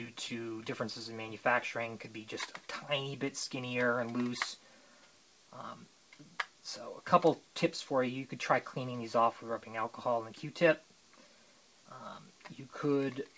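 No technical problems can be heard in this audio. It has come through a call path with a jitter buffer, and the content stops at 8 kHz, which fits a wideband call codec such as G.722.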